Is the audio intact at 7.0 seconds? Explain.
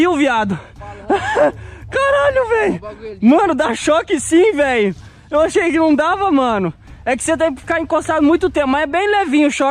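Yes, the audio is intact at 7.0 seconds, with no fault at that moment.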